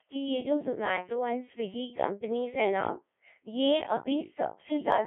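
From start to finish the speech sounds robotic and buzzy, with a hollow, synthetic edge and nothing audible above about 3.8 kHz. The band is narrowed to roughly 250 Hz to 3.5 kHz. This is the Codec 2 vocoder at work, heavily degrading the signal. It keeps only pitch, voicing, energy and a coarse spectral envelope, then rebuilds the voice from sine waves instead of the original waveform. The sound points to its very low 1.3 kbit/s mode.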